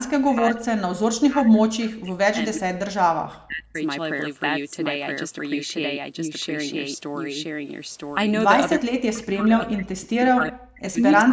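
Throughout the speech, a doubled audio track trails the original by roughly a second at close to the same level, likely an edit or a second, slower capture path holding two copies out of step. The waveform shows every burst repeated, undecayed, one second later, and the spectrogram shows the same full-band pattern twice.

From 0.0 to 3.8 s, 8.8 to 11.03 s, and briefly at 11.25 to 11.32 s, the speech is suppressed in double talk. The echo canceller likely confused the talker with loudspeaker echo and pulled the level down, by around 40 dB at its deepest and far less in the last short dip. It sounds like the voice sinking or breaking into fragments. On the waveform the envelope collapses in ragged chunks, and the spectrogram shows vertical gaps with the upper band, which ends near 8 kHz, thinning.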